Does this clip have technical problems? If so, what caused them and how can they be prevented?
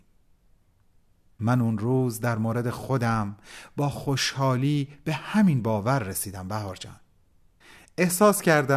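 No, nothing stood out as a technical problem on listening to this speech clip, so there is nothing here to trace to a cause or guard against.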